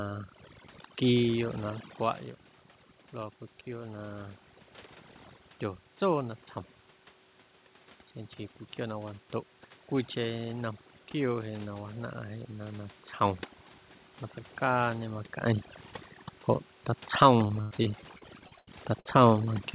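Speech heard through a narrowband call path, with nothing above 4 kHz, has its background pulled down and broken into twinkling specks throughout. That is overdone noise removal: the suppressor was set so hard that it shuts off individual frequency bands near its noise estimate, taking quiet parts of the voice with them. From 17.47 to 19.06 s the voice turns choppy and robotic, broken by a rapid string of short holes, the longest about 96 ms. This is repeated packet loss: each missing piece is patched by stretching the previous sound, and about a quarter of that stretch is filled this way.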